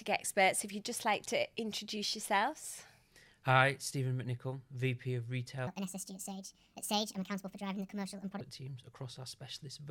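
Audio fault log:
5.67–8.41 s, section at the wrong speed: this stretch suddenly runs 1.54 times too fast, so everything jumps up roughly seven semitones and sounds hurried and squeaky before it snaps back. Likely an edit or playback step running this part on the wrong clock.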